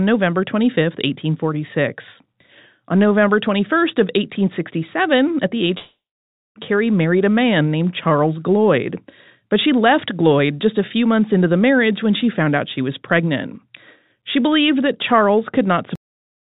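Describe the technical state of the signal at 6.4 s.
At 6.4 s the signal is in the middle of what is likely a long network dropout, running from 5.78 to 6.58 s, just after "at the age". The receiver stretches the last sound into a fading buzz, and by this point it has died away to silence, which lasts about 560 ms. Unlike a brief packet-loss glitch, the gap is too long to hide, and the audio resumes, still band-limited below 4 kHz, without the lost stretch.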